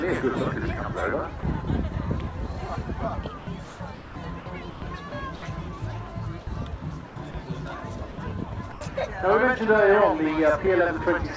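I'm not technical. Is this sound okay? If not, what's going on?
No. Several brief gaps sound like sound dropped by the voice detector. At 1.40 to 1.43 s, 7.31 to 7.34 s, 8.12 to 8.18 s and 8.72 to 8.81 s, short bits of sound vanish into steady noise or near silence. The likely cause is the sender's voice detector mistaking them for background and pausing. The receiving end filled each gap with stand-in noise.

From 3.38 to 4.82 s, and again from 5.09 to 5.42 s, the sound is chopped by the voice detector. It cuts in and out. This is likely the detector switching on and off repeatedly.

From 7.07 to 7.34 s, comfort noise replaces the background. The natural background is swapped for a smooth, steady hiss with no detail. This is likely the sender going silent while the receiver plays filler noise until sound returns.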